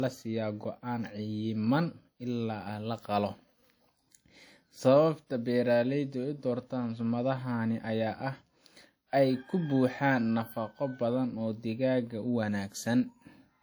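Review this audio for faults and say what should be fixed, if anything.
Throughout the speech, the smeared, watery texture of heavy compression persists despite the large file. This is likely low-bitrate audio saved at a high bitrate, fitting a 48 kbit/s WMA source re-encoded to 256 kbit/s MP3. Export from the original uncompressed recording instead of upconverting an already compressed copy.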